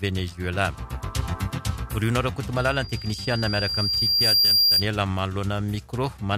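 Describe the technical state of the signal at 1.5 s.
At 1.5 s the signal is intact, with no dropout, distortion, glitch or other technical fault to be heard.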